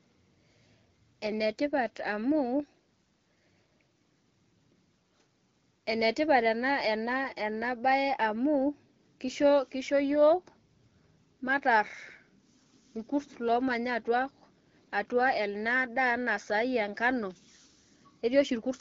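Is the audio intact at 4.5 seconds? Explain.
Yes, the audio is intact at 4.5 seconds, with no fault there.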